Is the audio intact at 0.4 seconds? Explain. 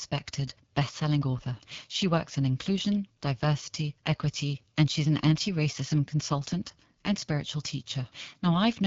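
No, at 0.4 s and throughout, the AMR wideband (HD Voice) codec leaves speech rough and raspy with nothing above 7.5 kHz, which fits a low rate like 8.85 kbit/s.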